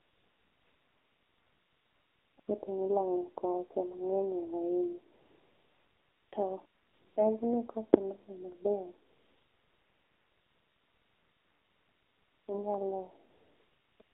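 A speech recording passed through the AMR narrowband mobile codec: nothing above 4 kHz survives, and the voice is buzzy and synthetic, which fits a low mode of about 7.4 kbps. AMR comfort noise replaces the real background at 0–2.38 s, 2.40–2.48 s, 5.14–6.32 s, 6.66–7.16 s, 9.10–12.48 s, 13.30–14.00 s and 14.02 s to the end. In those pauses, steady, smooth synthetic noise switches in and out because no speech frames were sent.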